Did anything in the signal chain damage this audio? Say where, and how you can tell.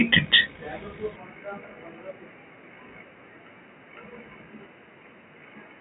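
Yes. From 1.16 s to the end the input likely switched to a poorer device. Everything above 3 kHz vanishes, the level drops about 5 dB, and new noise appears.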